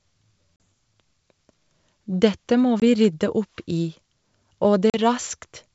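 Packet loss on an ADPCM call leaves silent holes at 0.56, 2.80 (before "vi rydde") and 4.90 s, lasting 40, 20 and 40 ms. The decoder's predictor loses step, so each return distorts briefly.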